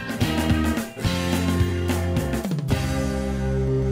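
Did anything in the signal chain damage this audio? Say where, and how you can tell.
Yes. At 1.7 s there is a brief click-like buzz, a single 10 ms piece of sound played twice with a hard join. This is a repeated buffer at the driver/buffer stage: fresh audio arrived late, so the device replayed its last 10 ms block once, losing essentially nothing.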